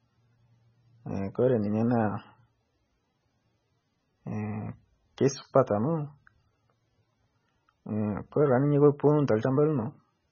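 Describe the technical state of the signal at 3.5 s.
MP3 compression artefacts are present at 3.5 s, as they are across the whole clip. The speech has nothing above about 6.6 kHz, and the heavy damage points to a very low bitrate, around 16 kbps, likely from MP3 encoding. Starved of bits, the encoder discards the treble and drops weak frequency components that flicker on and off between frames. That gives the speech a dull, watery, swirling quality, with s sounds chirpy and metallic and consonant onsets smeared.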